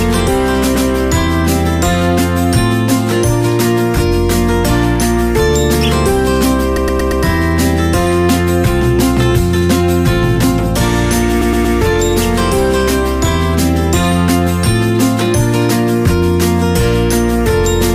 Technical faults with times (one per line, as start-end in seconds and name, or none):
0.74-0.88 repeated frames
6.76-7.22 repeated frames
11.40-11.75 repeated frames